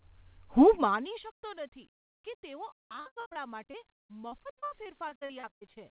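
From 3.0 s to 5.78 s, right after "કે તેઓ", repeated packet loss (robotic sound) takes over. Gaps up to 70 ms recur throughout, each patched by repeating the last sound, so about 28% of that stretch is filled in. The speech turns choppy, with pieces missing. Throughout, nothing is heard above 4 kHz, which fits a narrowband G.711 call codec.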